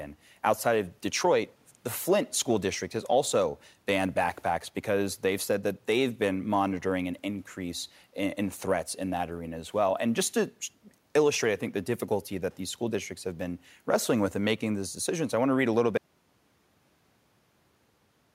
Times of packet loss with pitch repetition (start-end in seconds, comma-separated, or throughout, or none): none